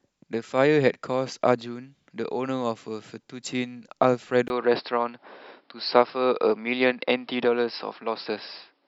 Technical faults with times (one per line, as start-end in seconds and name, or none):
4.48-8.88 input switched to a poorer device